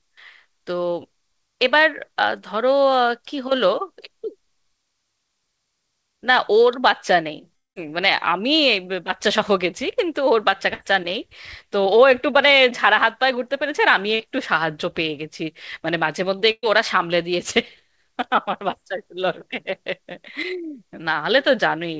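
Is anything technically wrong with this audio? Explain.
Yes. The speech has several gaps where audio failed to arrive, with nothing above 8 kHz because the G.722 call codec cuts the high band.

From 7.56 to 7.78 s there is a hole of about 0.2 s, most likely a long network dropout. The last sound is stretched briefly, then about 170 ms is flat silence. On the waveform it appears as a short fading tail and then a near-zero band, and the speech resumes without the missing section.

Two bursts of packet loss occur, at 10.74 to 10.81 s (60 ms missing) and 16.51 to 16.65 s (120 ms missing). The receiver carries the previous sound forward while turning it down. It is heard as a held buzz or fading hiss, and in the second burst the last 40 ms goes silent. A spectrogram shows smeared, repeated harmonics that thin out.

Short concealed packet loss appears at 14.15 to 14.21 s, 17.51 to 17.54 s and 18.71 to 18.75 s, each losing 20 to 40 ms. 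The decoder fills each hole by extending the preceding sound, so there is a brief smear or wobble. These show as tiny stretched patches in the spectrogram.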